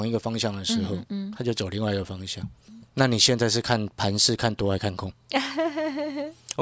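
Speech recording with no audible technical faults anywhere.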